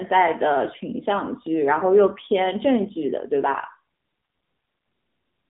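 From the first moment to the end, the speech carries the AMR narrowband mobile codec sound. The band runs only from about 150 Hz to 3.7 kHz, with nothing above, because the codec samples at 8 kHz and rebuilds the voice from a vocal-tract model excited by sparse pulses. What separates it from a plain telephone filter is the plainly audible buzzy, synthetic grain on voiced sounds, which points to a low mode around 7.4 kbps.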